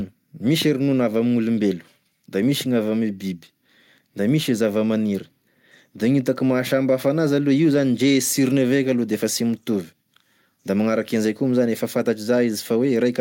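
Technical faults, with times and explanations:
No technical faults can be heard anywhere in this speech recording. There is nothing to list, so no times or explanations apply.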